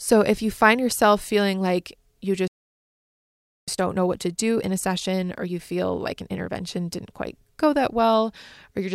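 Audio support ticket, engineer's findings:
Playback stall, 2.47–3.68 s: player likely starved of data or its thread blocked; speech cuts out mid-flow for about 1.2 s, then resumes.

Time-compressed catch-up, 3.68–6.68 s: player trims backlog by cutting and cross-fading small segments; speech runs about 1.15× fast at normal pitch.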